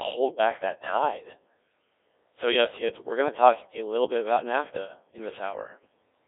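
From the first moment to the last, the speech carries the sound of the Codec 2 vocoder, with heavy damage. The decoder rebuilds the voice from sine waves guided only by pitch, voicing, energy and a spectral envelope, so the original waveform is lost. That leaves a robotic, buzzy tone, and the thin quality points to roughly 1.3 kbit/s. On a spectrogram the energy sits between 300 Hz and 3.6 kHz, with smeared, regular harmonic stripes instead of natural detail.

From 0.13 s to 5.74 s there is a regular click every 0.80 s, about seven in all. These are likely clock drift buffer slips. Two clocks disagreeing by roughly a tenth of a percent let a buffer creep until a short block of a few dozen samples is dropped or repeated. Each one is a tick against the buzz. On the waveform it is a tiny step discontinuity, and on a spectrogram it is a thin vertical broadband line, evenly spaced.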